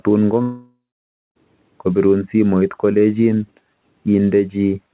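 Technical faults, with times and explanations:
0.42 to 1.37 s, long network dropout: sound stretches into a fading buzz, then silence, returning at "kopirun simoit kolechin" with audio missing, likely from packets never arriving.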